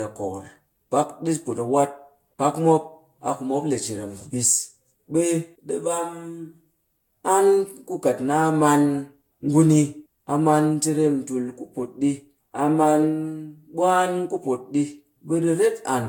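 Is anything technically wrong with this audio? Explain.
Yes. The speech shows generation loss for its whole length. It sounds swirly and hollow, and consonant attacks are smeared. Nothing is present above 19.1 kHz. The artefacts are heavier than a single pass at a moderate rate would give. This is likely from repeated lossy coding, around five passes. The character fits Vorbis at roughly 70 kbit/s. Each re-encode quantises again on a shifted frame grid. Noise and spectral gaps build up with every pass.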